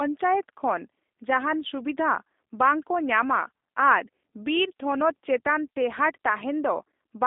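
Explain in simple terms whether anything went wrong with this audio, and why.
The speech passed through a G.729 codec, which rebuilds the voice from a rough model, so throughout it sounds thin, rough and slightly robotic, with nothing above about 3.7 kHz.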